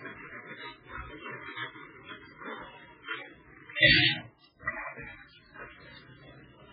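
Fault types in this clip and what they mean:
MP3 compression: The sound is dull and watery from start to finish, with nothing above 4.7 kHz and a swirling texture as faint detail flickers in and out. The likely cause is heavy MP3 encoding at a rate that fits roughly 8 kbps, which cuts the treble and drops weak frequency components.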